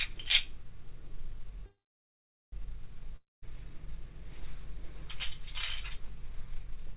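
A recording of everyday sounds carried over a call path whose G.711 mu-law coding leaves nothing above 4 kHz. From 1.66 to 2.54 s a call audio freeze, likely jitter-buffer underrun, stretches the last sound into a fading buzz and then about 0.79 s of flat waveform before resuming with nothing lost. From 3.16 to 3.44 s a long network dropout, likely lost packets, shows a brief decaying smear, then about 0.19 s of blank spectrogram, and roughly 0.26 s of audio never returns.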